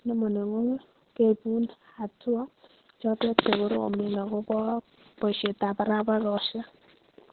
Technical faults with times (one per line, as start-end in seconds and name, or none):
0.00-7.32 Opus voice compression